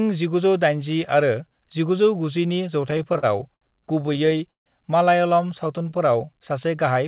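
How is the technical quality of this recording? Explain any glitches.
The recording has clear glitches: two stretches of stutter and one spot where the audio drags. It's also narrowband, with nothing above 4 kHz, which fits a G.711 A-law call path at 64 kbps.

From 2.82 to 3.63 s there are repeated stalls (stutter): nine short gaps, the longest about 70 ms, where packets arrived late and the jitter buffer ran dry. The receiver kept extending the last sound, so nothing's lost, but it hiccups.

Between 4.01 and 4.68 s the stutter returns: eight gaps covering about a third of that span, one lasting 150 ms. On that longer wait the stretched sound fades out before the audio picks up again, so it feels more broken.

From 5.42 to 6.38 s there's a jitter buffer slow-down. The buffer was rebuilding its reserve by repeating single pitch periods or bits of pauses, adding 95 ms and playing at 91% speed. 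The pitch stays put, but the sound is drawn out.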